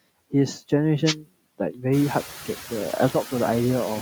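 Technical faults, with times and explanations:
throughout, noise suppressor artifacts: the background noise is pulled down by about 16 dB between stretches of speech and comes back up beneath it, so the floor pumps with the talking. This includes after the room noise rises around 2.0 s. On a spectrogram, the noise band shows as dark gaps between syllables and paler, grainy patches under them.
1.04 to 1.14 s, wireless microphone noise hit: a brief swish of static lasting about 0.1 s. The radio link of the FM microphone fades momentarily, and receiver noise swells up. A spectrogram shows a short broadband vertical smear, and the waveform shows a ragged, fuzzy patch.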